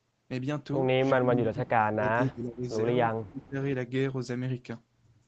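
An echo canceller that likely could not tell the near talker from loudspeaker echo while both sides spoke at once pulled the speech down with it, which is speech suppressed in double talk. From 1.15 to 2.68 s the voice sinks by as much as about 35 dB, and the same ducking returns more briefly from 3.15 to 3.56 s. The audio stays band-limited to 8 kHz throughout, consistent with the call codec path.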